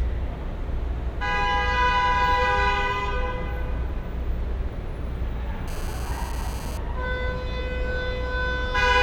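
At 5.68 s a GSM phone buzz cuts in and stops at 6.78 s, a harsh, raspy 217 Hz rasp full of harmonics, about 18 dB under the sound. A nearby 2G phone's bursts got rectified in the audio circuit, and the short spurt points to a data transfer.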